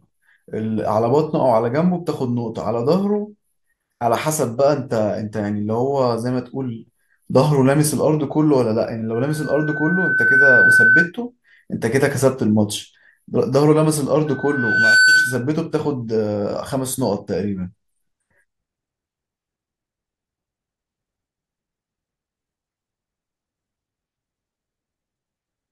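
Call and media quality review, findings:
Loudspeaker feedback squeal, 9.14–11.12 s. Mic picking up its own loudspeaker, loop gain above unity at 1.5 kHz; tone swells over about a second and a half to roughly 10 dB above the speech.

Loudspeaker feedback squeal, 14.26–15.49 s. Same acoustic loop, same 1.5 kHz ring; faster onset, well under a second, peaking around 10 dB over the speech.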